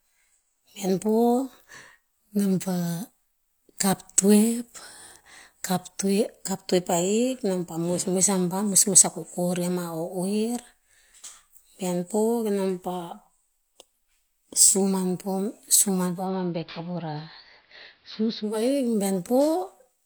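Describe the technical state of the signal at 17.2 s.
At 17.2 s the speech sounds dull and veiled, with a steady hiss roughly 35 dB down and level about 1 dB lower. This is digital radio blending to analogue: from 16.06 to 18.67 s the receiver cross-fades over about 250 ms to the station's AM broadcast, then returns.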